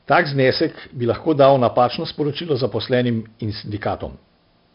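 From the first moment to the last, the speech carries heavy 4-bit ADPCM compression. Each sample is coded as a small step away from a prediction, and the step size follows the level, so a gritty hiss rides on every loud syllable, and where the step can't grow fast enough, sharp onsets crunch. Nothing comes through above 5.3 kHz, which dulls everything and points to a low sample rate. The overall grain fits roughly 44 kbps.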